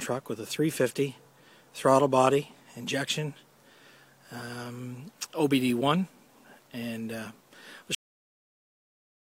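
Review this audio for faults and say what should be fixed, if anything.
Cut-off end at 7.95 s. The sound stops mid-event and drops straight to digital silence with no decay. The final buffers never reached the output. Flush and write all remaining buffers before closing the file or stream.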